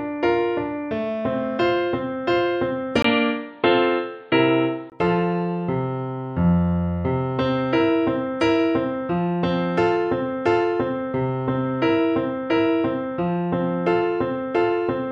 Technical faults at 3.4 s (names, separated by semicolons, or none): input switched to a poorer device